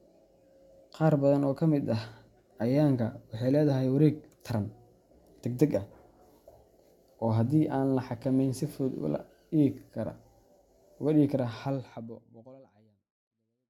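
Nothing stood out on listening to this speech recording, and the level simply eases away in a smooth fade-out over its last couple of seconds.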